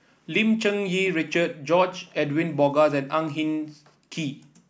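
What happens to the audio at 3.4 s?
Nothing goes wrong at 3.4 s; the speech continues intact through that moment with no audible fault.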